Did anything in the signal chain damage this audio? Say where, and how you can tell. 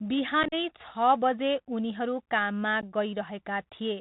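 Yes. The Bluetooth CVSD headset codec damages the whole clip at the codec stage, audibly throughout. Its one-bit delta modulation, which fits a 64 kbps link, passes nothing above 4 kHz. Loud high sounds outrun the adaptive step and distort, s sounds turn scratchy, and a granular hiss sits under the speech.

Unconcealed Bluetooth headset packet loss on the wireless link leaves about 52 ms of holes between 0.43 and 0.54 s, with the longest run 37.5 ms. Several short voice packets were dropped and replaced with silence or an idle pattern, leaving abrupt chopped gaps. A second hole of about 15 ms, a couple of packets, falls at 2.81 s, just after "बजे उनीहरू काममा".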